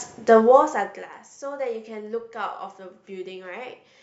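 From 0.35 s to 1.21 s the speech picks up zipper noise: the level drops by roughly 20 dB, but instead of gliding down it's applied in coarse steps with no smoothing, around 40 a second. Each jump puts a tiny click into the waveform, so you hear a fast ticking or zipping sitting on top of the speech for as long as the level is moving, then it stops once the drop is done.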